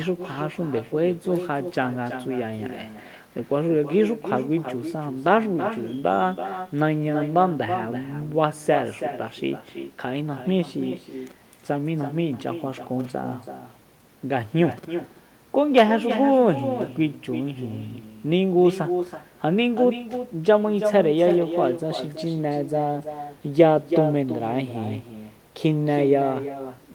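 From start to finish there's echo with no canceller: the far end's loudspeaker feeds its mic and nothing strips it out, so every phrase comes back roughly 300 ms later, about 9 dB down and thinner, trailing the talker like a shadow.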